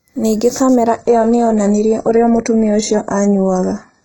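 Right from the start there's channel delay causing comb filtering: one side lags the other by a fraction of a millisecond, and summing them to mono cancels evenly spaced frequencies, the first notch sitting somewhere around 3 kHz, so the speech sounds hollow and a bit phasey.

Then at 0.87 s the adaptive stream drops to a lower bitrate and stays there to the end. With no gap, the treble suddenly cuts off above 11 kHz and codec artefacts rise, which fits a switch from a decent AAC stream to a very low-bitrate HE-AAC one.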